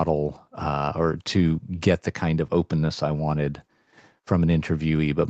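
The speech comes through the usual call chain of microphone processing and a WebRTC call path whose content stops at about 8 kHz, consistent with an Opus wideband link at a moderate bitrate, and nothing in it departs from what that chain normally produces.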